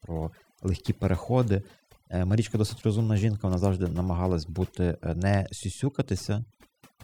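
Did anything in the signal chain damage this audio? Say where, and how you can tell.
Yes: overdone noise removal at the processing stage, throughout. Gaps fall to near silence with twinkling specks. A spectrogram shows scattered isolated dots and bands gated out.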